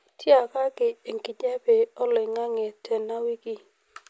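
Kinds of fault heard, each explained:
No technical faults can be heard in this speech recording. There is nothing in it that needs a fault explanation.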